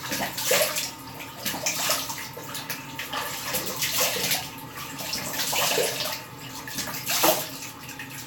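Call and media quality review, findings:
Nothing to flag here, the sound comes across steady with no dropouts, glitches or other playback problems anywhere in the clip.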